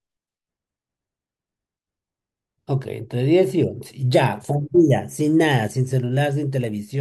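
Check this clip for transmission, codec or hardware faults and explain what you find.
No such fault can be heard here.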